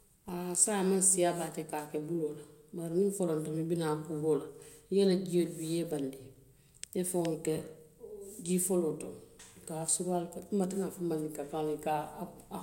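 No technical faults can be heard anywhere in the recording. The speech runs without any interruption, distortion or other audible problem.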